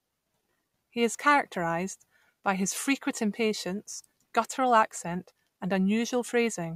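No dropouts, distortion, glitches or level jumps turn up anywhere in the speech; nothing to flag.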